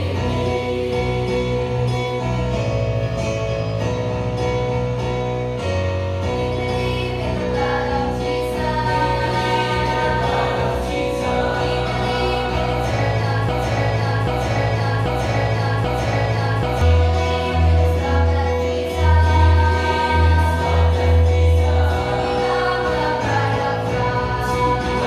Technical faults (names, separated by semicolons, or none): broken-record loop